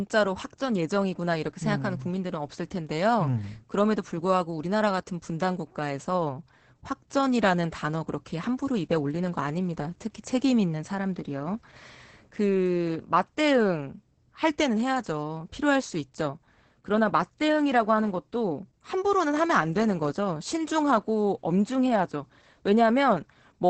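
It's a speech clip with heavy Opus voice compression the whole way through: everything above about 8.7 kHz is gone, so it sounds muffled, and the coarse SILK-style excitation leaves it hoarse and a bit robotic, which points to a wideband voice stream at roughly 10 kbps.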